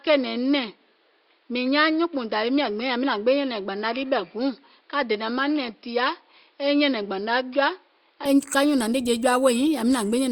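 From 0.0 to 8.26 s the speech is band-limited, with nothing above 5.3 kHz, sounds duller and somewhat quieter, and carries a faint added noise floor. It opens up abruptly without any gap, likely an input switched to a poorer device.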